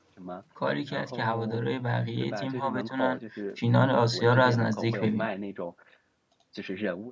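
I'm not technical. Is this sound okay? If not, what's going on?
Yes, nothing stood out on listening; the missing lowest bass is just the normal effect of a call microphone's processing.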